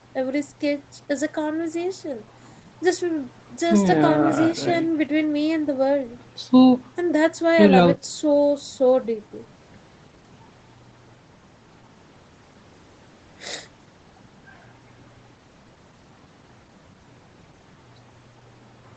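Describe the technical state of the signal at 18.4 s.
At 18.4 s the speech is intact, with nothing above 8 kHz, consistent with its wideband Opus call path rather than a fault.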